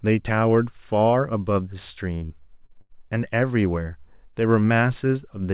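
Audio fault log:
2.15–2.92 s, repeated packet loss (robotic sound): the sound turns choppy, breaking up four times in under a second, with the longest hole about 82 ms. Each gap was bridged by stretching the preceding sound, so roughly a quarter of this stretch is synthetic filler rather than real signal, which gives the buzzy, machine-like quality. The narrowband call path, with nothing above 4 kHz, fits G.711.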